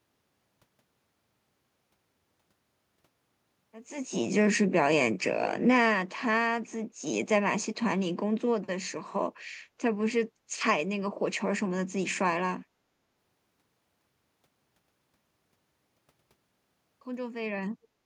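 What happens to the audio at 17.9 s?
Around 17.9 s there is a brief echo leak, running from 17.82 to 17.88 s: a faint, delayed copy of the speech arriving about 442 ms after the original, sitting far below the direct voice and lasting only a fraction of a second. The likely cause is a loudspeaker at the far end whose echo canceller let a scrap of the returned signal through its microphone path and back into the call.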